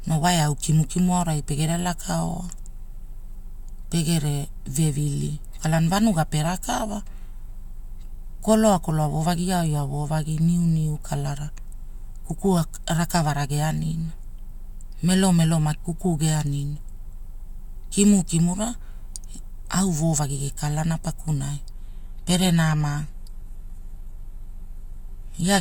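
Speech, with an adaptive stream at a lower bitrate taking over from 21.73 s to the end. The switch is abrupt but seamless: swirly codec artefacts rise, and nothing is heard above 14.9 kHz. This fits a drop from roughly 96 kbit/s AAC to a 20 kbit/s HE-AAC rendition after the connection slowed. The lack of any gap or stall separates it from buffering dropouts or packet loss.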